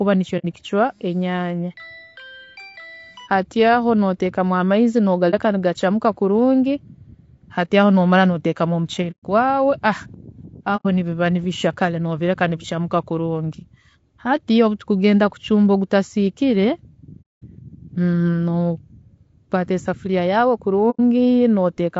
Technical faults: low-delay AAC compression; AAC frame loss with muting

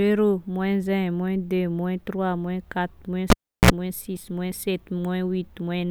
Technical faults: cable pulled and plugged in

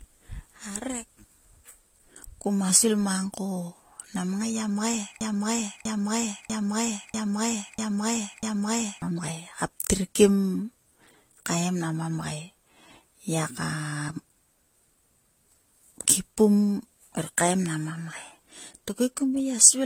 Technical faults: transcoding between lossy codecs; broken-record loop

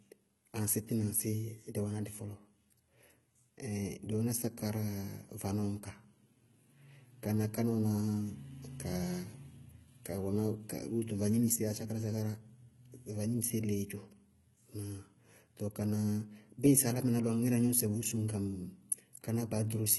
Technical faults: HE-AAC compression

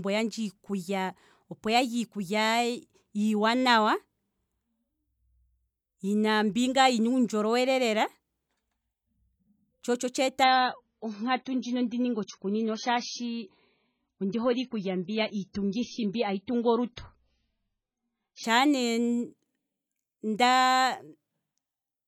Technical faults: adaptive stream at a lower bitrate

